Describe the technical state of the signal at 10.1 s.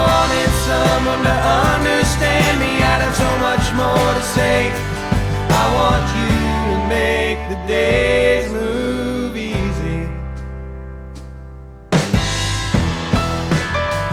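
Nothing is wrong with the signal at 10.1 s; the audio is intact at that point.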